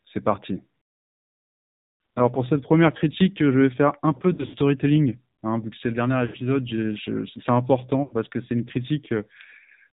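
AMR narrowband mobile codec, throughout: the speech is rebuilt from a vocal-tract model driven by sparse pulses, with nothing above 4 kHz, leaving a plainly buzzy, synthetic voice consistent with a low mode near 7.4 kbps.

Lost AMR speech frames at 4.34–4.57 s after "faire un peu" (140 ms missing), 6.26–6.36 s after "que c'est le dernier", and 8.04–8.15 s before "que c'est une" (80 ms each): the decoder repeats its last pitch and filter settings at falling gain, smearing and dipping the voice.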